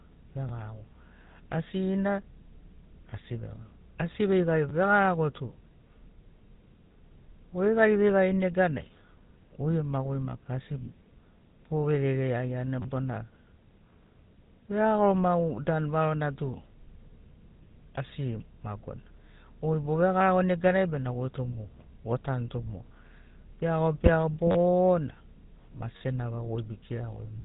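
The whole recording has passed through the GSM full-rate codec, the original mobile speech coder. It models the vocal tract and excites it with a sparse, regular pulse train, so much of the fine detail in the speech is thrown away. The damage is plainly audible as a gritty, buzzy roughness over every syllable. The band is also cut off near 3.8 kHz, which leaves the speech dull and boxy, with no air or crispness at the top.

From 12.82 to 12.85 s, fresh audio failed to reach the output in time, so the playback device kept replaying its last buffer. One slice of about 10.7 ms, which fits a 512-sample buffer, is heard three extra times back to back, with a hard edge at each join. Because the slice is so short, the result is a brief buzzing burr rather than an obvious stutter. No audio is dropped; the sound simply resumes after the repeats.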